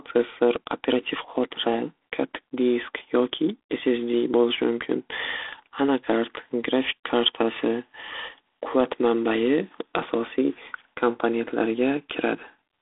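A speech recording that has been squeezed through G.726 ADPCM telephone coding, and the coding noise is plainly audible from start to finish. Each sample is sent as a few bits describing its difference from an adaptive prediction, and the coarseness here fits the 24 kbit/s rate. The result is a harsh, rasping hiss that rises and falls with the level of the speech. The band is held to roughly 300 Hz to 3.5 kHz, with nothing above 3.8 kHz.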